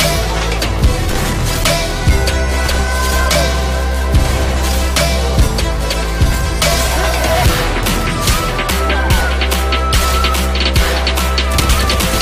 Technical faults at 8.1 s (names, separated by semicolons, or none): none